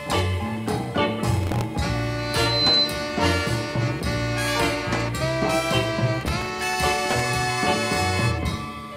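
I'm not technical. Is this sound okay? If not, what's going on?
No. There are two kinds of fault.

From 1.34 to 1.64 s, and again from 6.21 to 7.20 s, there is processor overload crackle. The computer handling the audio falls behind and misses its very short processing deadlines again and again. Each time, a sliver of old audio gets repeated with a hard edge. These tiny repeats pile up into a gritty, tearing crackle on top of the sound, and the second burst is longer.

From 2.18 to 2.97 s there is loudspeaker feedback squeal. A microphone is picking up the loudspeaker it feeds, and the sound loops round and round, growing at one pitch. Here that is a high tone around 4 kHz. It swells over about half a second into a piercing squeal that sits noticeably louder than the sound itself before it stops.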